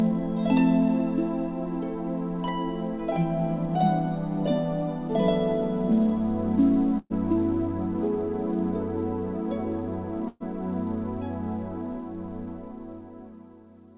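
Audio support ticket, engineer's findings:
Burst of packet loss at 6.98–7.13 s and 10.28–10.43 s: jitter buffer missing packets, receiver conceals about 120 ms each time by extending then fading the last sound, followed by roughly 10 ms of silence; about 120 ms of audio skipped before playback resumes. Call path band-limited, nothing above 4 kHz, consistent with G.711 mu-law at 64 kbps.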